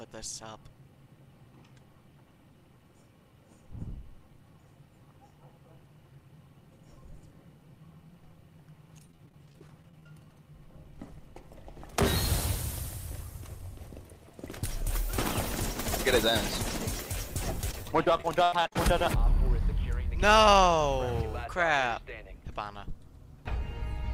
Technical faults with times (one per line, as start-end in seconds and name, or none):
9.07-10.06 repeated packet loss (robotic sound)
17.71-18.76 repeated packet loss (robotic sound)